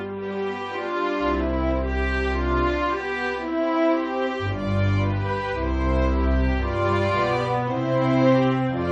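Nothing technically wrong can be heard in the audio, from its opening to its final moment.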